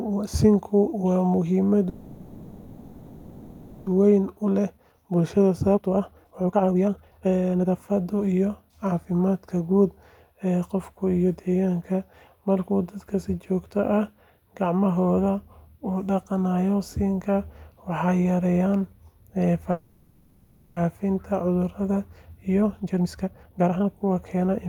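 The speech stalls twice, from 1.89 to 3.88 s and from 19.71 to 20.78 s. Each time the last sound is stretched into a fading buzzy hiss for about 2 s and then about 1 s, with no true silence. The speech resumes where it stopped, losing nothing but arriving later. This is a call audio freeze, likely from delayed packets draining the jitter buffer, so the receiver had to fill the gap. Right after each stall, from 4.18 to 9.69 s and again from 21.80 to 24.66 s, the talking turns hurried while keeping its normal pitch. It runs at about 136% and then 133% of normal speed. This is a jitter buffer speed-up. Once the held-back packets arrived together, the buffer was overfull. The receiver cut many tiny pitch-period slices to shed the added delay, roughly two seconds in the first stretch and one in the second.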